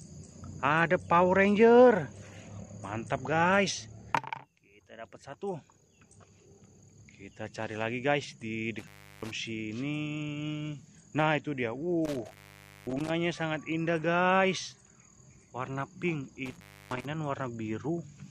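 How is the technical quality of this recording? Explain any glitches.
The recording has an intermittent contact fault, three times: 8.79 to 9.31 s, 12.05 to 13.10 s, and 16.46 to 17.06 s. A loose cable or plug briefly opens. The sound drops out for about 0.35, 0.54 and 0.31 s, with crackle at the edges.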